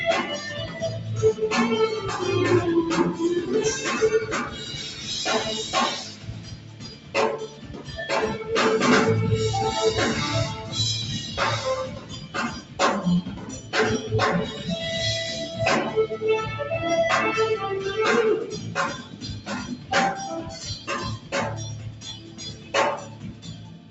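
A noise suppressor applied to music or sounds runs throughout, treating sustained material as noise and pulling it down by up to around 15 dB, so held passages pump and thin. Sound cut by the noise suppressor appears at 0.67–0.82 s, 4.46–5.07 s, 6.04–7.93 s, 11.87–13.73 s, 18.57–19.91 s and from 20.44 s to the end, with drops of about 6 to 10 dB.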